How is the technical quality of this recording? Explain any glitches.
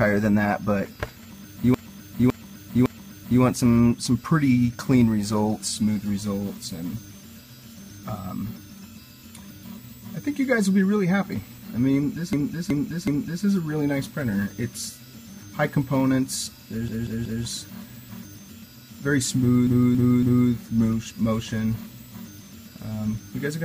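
Repeated frames cause a stutter four times: 1.74–3.42 s, 12.33–13.45 s, 16.88–17.44 s and 19.67–20.51 s. Chunks of about 0.56, 0.37, 0.19 and 0.28 s play three extra times each, as if compressed frames were resent, adding time.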